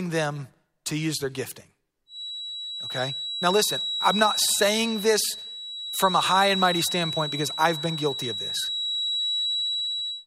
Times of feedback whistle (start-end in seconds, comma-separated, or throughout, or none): 2.05-10.27